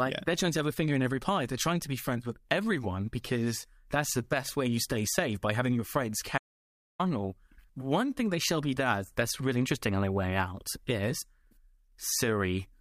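Audio dropout to silence at 6.38–6.99 s in this speech recording, after "by having your friends": 0.61 s of silence, likely a dropped input.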